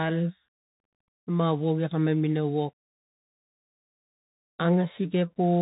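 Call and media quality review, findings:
Bluetooth CVSD headset codec, whole clip. Speech band-limited to 4 kHz; s sounds scratchy, loud high-energy passages distorted where the adaptive one-bit step can't keep up; granular hiss under speech. Damage plainly audible, consistent with 64 kbps CVSD. Spectrogram: hard ceiling at 4 kHz, speckled noise floor. Waveform: slope-limited, jagged peaks.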